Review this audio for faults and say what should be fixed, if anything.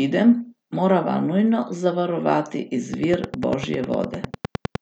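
From 2.94 s to 4.76 s there's a train of clicks riding over the speech, a steady tick at about 9.9 per second, so around twenty of them, all much the same shape and standing roughly 10 dB above the speech. Because they're so evenly paced and keep going through the gaps, this is likely electrical interference from nearby gear or a faulty connection or power supply. To prevent it, move or isolate nearby equipment and check the interface and its cabling before recording again.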